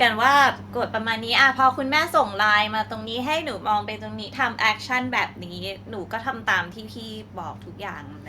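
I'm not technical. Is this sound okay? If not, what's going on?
No. Two problems show up close together near the start of this speech clip.

Microphone volume stepped down, at 1.02 s: the level of the speech and the background falls suddenly, all at once, like someone nudging a volume knob down a notch. The drop is small but abrupt rather than smooth. This is likely the call software judging the microphone too hot and turning its input volume down in a single step instead of easing it.

Microphone overload, from 1.38 to 1.42 s: for that brief moment the loudest parts of the speech push past the most the microphone input can handle, so their tops are sliced off flat. That gives a short, harsh, crackly edge to the sound. Only a small fraction of the audio is affected, and only slightly past the limit, so it is a quick rasp rather than heavy distortion, consistent with the microphone input being set too high.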